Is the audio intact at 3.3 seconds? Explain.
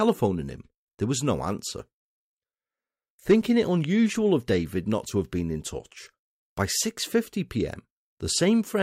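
Yes, at 3.3 seconds the speech plays through cleanly, with no dropout, click, distortion or other fault to be heard at that point.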